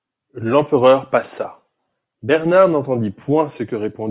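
No technical faults can be heard anywhere in this speech recording. There is nothing to place on the timeline and no event to describe.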